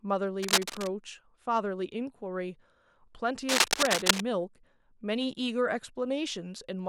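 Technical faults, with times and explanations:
0.39–0.88 s and 3.49–4.22 s, cable scratch noise: dense, uneven bursts of scratching ride over the speech, first about as loud as it, then a little louder. This is likely a worn cable or connector being moved. Unlike steady hiss or isolated clicks, the noise is ragged and comes in brief clusters.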